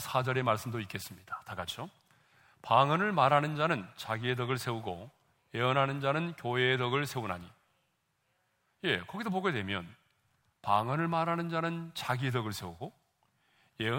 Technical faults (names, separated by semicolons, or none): none